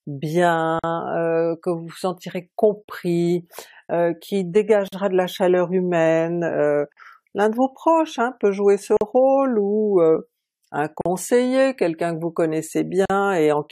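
Gaps at joins of encoded pieces fall at 0.79, 4.88, 6.93, 8.97, 11.01 and 13.06 s, from 4.88 s onward every 2 s. Each is a gap of 43 to 46 ms where separately encoded pieces were butted together untrimmed. The encoder's start delay and last-frame padding remain, so the sound drops out and resumes where it stopped.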